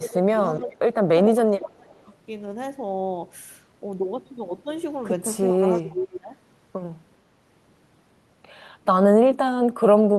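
From 0.0 to 0.4 s the speech dips by about 15 dB: speech suppressed in double talk. The likely cause is an echo canceller that could not tell the near talker from loudspeaker echo while both sides spoke, so it attenuated everything. The waveform envelope sags. The same gating returns, deeper, from 0.58 to 1.08 s and from 1.24 to 2.07 s (about 25 dB), and again from 5.88 to 6.39 s (about 20 dB). There the speech sounds choked or broken into pieces.

Alongside these, an echo leak appears as brief ghost copies of the speech arriving roughly 420 to 430 ms late. They occur at 0.46–0.53 s (about 40 dB below the speech), 0.71–0.76 s and 5.72–5.82 s (about 35 dB below), and 6.13–6.18 s, where the echo is only about 15 dB down. This is likely residual loudspeaker pickup on one side that its echo canceller failed to remove. On a spectrogram each leak shows as a time-shifted repeat of earlier speech patterns.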